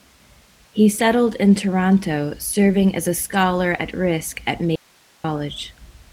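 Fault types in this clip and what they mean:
Short concealed packet loss: Around 2.71 to 2.75 s, just before "as a", a few hundredths of a second never arrived in time and the receiver extended the preceding sound to cover it, giving a brief smear.
Audio dropout to a faint residue: From 4.76 to 5.24 s the speech cuts out abruptly for about half a second, leaving only hiss roughly 35 dB below the signal, likely from a break in the signal path upstream. The waveform collapses to a thin noise band, and the spectrogram shows a sharp-edged gap filled with faint broadband grain.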